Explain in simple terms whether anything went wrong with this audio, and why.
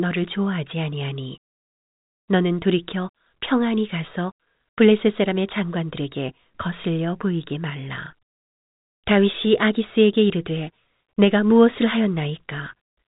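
Nothing went wrong with this audio: the speech comes through just as an ordinary telephone line would carry it, with no faults anywhere.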